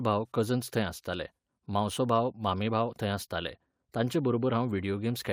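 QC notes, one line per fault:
0.47–0.49 s, lost packet rebuilt from error correction: one packet went missing in transit, and the decoder filled the hole with the reduced-bitrate backup copy that the following packet carried inside it, which fits a single 20 ms frame. Because the backup was played, the speech runs on with no gap or dropout. That brief stretch sounds rougher and noisier than its surroundings, since the low-bitrate copy holds less detail than the original frame.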